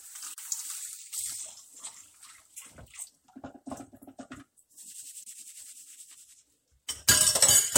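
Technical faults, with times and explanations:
0.34–0.38 s and 5.24–5.26 s, gap at a join of encoded pieces: separately encoded chunks spliced untrimmed leave roughly 42 ms and 28 ms silences, with smeared edges, before the sound resumes.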